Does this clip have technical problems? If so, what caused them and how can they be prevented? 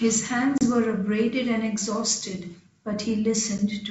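Yes. Packet loss on an ADPCM call, which here is G.722, strikes at 0.58 to 0.66 s, where about 30 ms (a few packets) is lost, and briefly at 3.58 s, a 10 ms gap. Each gap is filled with hard-edged silence. Because the decoder's adaptive predictor and step size then no longer match the sender's, the speech resumes slightly distorted before settling. The G.722 wideband coding itself carries the speech cleanly up to 7 kHz.

To prevent it, use packet loss concealment that resynchronises the ADPCM decoder state, backed by a jitter buffer or redundant transmission, so missing packets are bridged rather than silenced.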